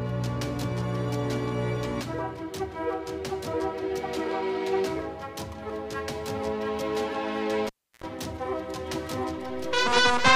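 The audio has a cable pulled and plugged in between 7.67 and 8.04 s. A pop opens a gap of about 0.32 s of near silence, then roughly 80 ms of 60 Hz mains buzz while only the plug tip makes contact, and a second pop as the signal returns.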